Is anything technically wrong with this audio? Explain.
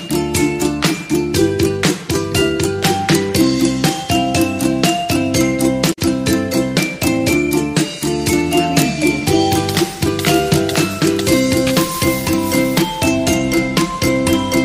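Yes. From 5.89 to 5.99 s there is damaged data in a compressed stream. Corrupted bytes make the decoder misread the frames there and hunt for the next valid frame header, producing a brief glitch. A plain dropout would simply go silent rather than garble the sound.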